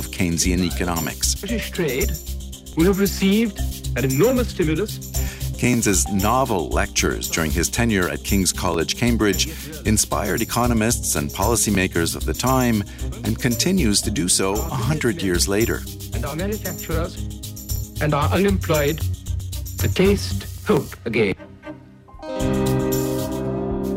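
At 2.73, 5.74, 8.74, 11.75, 14.76, 17.76 and 20.77 s there's a tick or stutter, and the steady spacing gives it away as overlapping chunks. The audio went through in 3-second blocks, and each new block starts about 6.5 ms before the previous one finished, so that sliver plays twice at every join. The duplicated bit is too short to hear as a repeat, so you just get a regular click.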